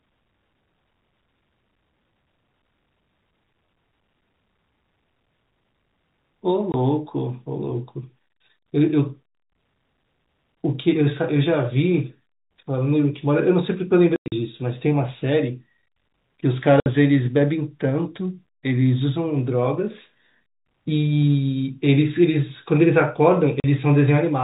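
Packet loss filled with silence cuts the speech four times. The first gap runs from 6.72 to 6.74 s. The worst is a broken stretch from 14.16 to 14.32 s, with the longest hole lasting 100 ms. Shorter dropouts follow at 16.80 to 16.86 s and 23.60 to 23.64 s. Data went missing, and the receiver played nothing in its place. Every gap is a multiple of 20 ms, which fits 20 ms packets. The gaps have hard edges. The narrow G.711 telephone band is audible throughout.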